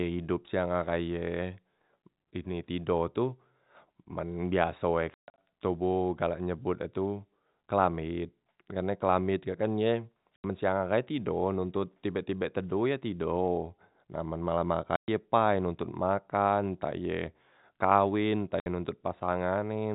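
Packet loss filled with silence strikes at 5.14 to 5.38 s (about 200 ms missing, scattered), 10.36 to 10.44 s between "kelamet kak kan ye" and "siang ahai tido nontot", 14.96 to 15.08 s after "na men malem", and 18.60 to 18.66 s after "entah iye kawen entah". Lost packets were replaced with silence, leaving hard-edged holes in the speech in steps that fit 20 ms packets. The band-limited G.711 telephone sound carries through.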